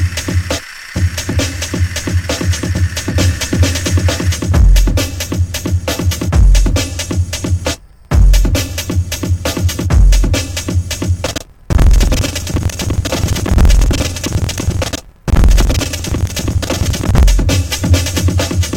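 From 11.24 s to 17.27 s the sound breaks into a rough, robotic rattle at about 21.5 Hz. This is buffer tearing. The writer and the reader of the playback ring buffer have drifted, so they cross inside every period, which fits a 2048-sample buffer. Roughly half of each block repeats audio from about a tenth of a second earlier, hard-spliced on both sides. A spectrogram shows evenly spaced vertical seams, and the waveform shows sudden steps at each join.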